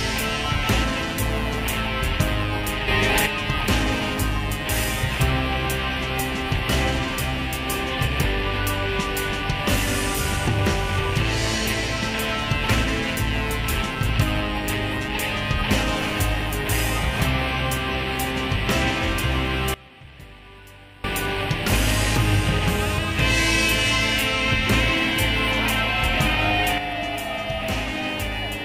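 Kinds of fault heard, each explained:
Sudden gain jump: sound and background noise leap up together by about 6 dB from 2.88 to 3.26 s, drop by about 21 dB from 19.74 to 21.04 s, then drop about 6 dB from 26.78 s to the end, each step instant, likely gain applied without a ramp.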